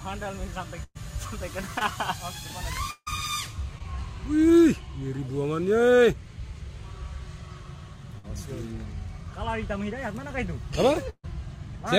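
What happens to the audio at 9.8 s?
Nothing goes wrong at 9.8 s; the audio is intact at that moment, with no dropout, click or distortion.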